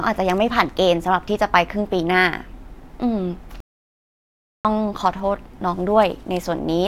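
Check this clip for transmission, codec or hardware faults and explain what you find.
One fault in this speech clip. A playback stall from 3.60 to 4.65 s: the audio stops dead for about 1.04 s, likely because the player ran short of data, then resumes. Waveform and spectrogram show a flat, empty gap.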